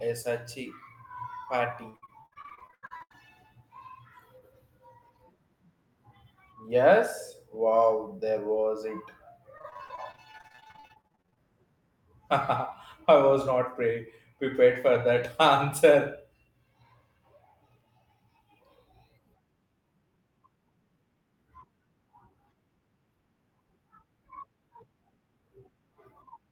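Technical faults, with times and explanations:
1.89 to 3.16 s: repeated packet loss (robotic sound). Audio went missing again and again in short holes, the longest about 80 ms, and each hole was filled by extending the preceding sound, so roughly half of this stretch is patched rather than real, giving a choppy texture with pieces missing.
9.58 to 11.38 s: repeated packet loss (robotic sound). A denser run of briefer holes, none longer than 40 ms, with about a third of the stretch concealed, producing the same choppy stutter.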